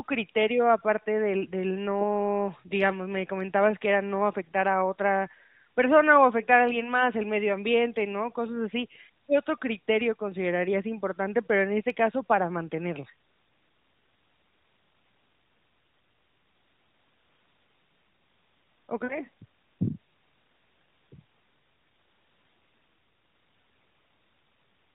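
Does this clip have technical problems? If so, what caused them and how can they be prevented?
Yes. Lost AMR speech frames occur from 19.04 to 19.19 s, where about 60 ms of audio is gone. That fits three consecutive 20 ms frames failing their checksum after radio errors. The decoder bridges the gap by repeating the last good pitch and vocal tract settings with shrinking gain, so the sound smears, fades toward silence, then returns briefly weak or rough. The narrowband AMR coding heard throughout cuts everything above 4 kHz. Better radio coverage or stronger error protection on the link would prevent these frame losses.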